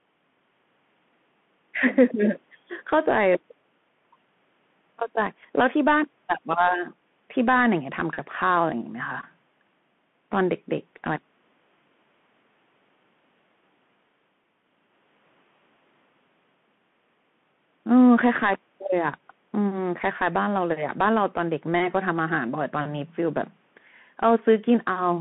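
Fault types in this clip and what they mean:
Bluetooth CVSD headset codec: The speech has passed through the narrowband headset link, where each sample is coded as a single up-or-down bit whose step size adapts, which fits a 64 kbps CVSD stream. The line passes only about 150 Hz to 3.4 kHz, so the speech sounds thin and boxy. The codec damage is plainly audible: loud, fast-rising sounds outrun the step size and distort, s sounds turn scratchy, and a granular hiss sits beneath the speech throughout.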